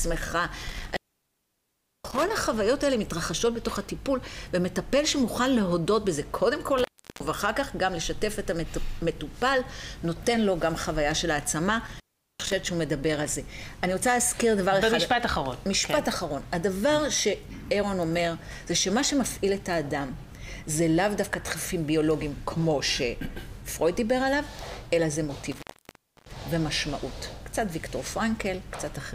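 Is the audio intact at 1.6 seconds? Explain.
No. An intermittent contact fault runs from 0.68 to 2.31 s: a loose cable or plug briefly loses its connection, so the signal drops out for about 1.08 s, with crackle at each edge and faint hiss while the line is open.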